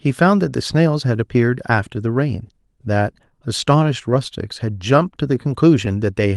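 From the start, the tempo of the speech wobbles slightly and unevenly, with faint catches that recur at irregular spacing. This is clock drift between sender and receiver: the sending clock runs about 2 percent slow, so the receiver's jitter buffer keeps draining and has to stretch the audio to keep up.

From 1.07 s to 6.22 s, that stretching is audible as repeated timing corrections. Small pieces are repeated again and again, always lengthening the audio, adding roughly 70 ms in total and pulling the pace down to about 99 percent. Each is small, at most a slight hiccup or a momentary drag.

Between 3.30 s and 4.60 s come scattered short gaps: about four brief ticks or smears where the receiver filled missing packets by carrying the last sound forward. The longest is around 10 ms, with roughly 30 ms patched overall. The band-limited top end, near 12 kHz, fits the Opus call path at around 32 kbps.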